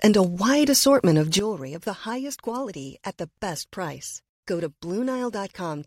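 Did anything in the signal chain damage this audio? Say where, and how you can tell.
Yes. At 1.39 s the speech and the background noise drop together by about 12 dB and stay lower to the end, a sudden gain jump most likely from a digital gain stage applied without a ramp. The waveform envelope steps down at once, and the spectrogram's noise floor darkens evenly.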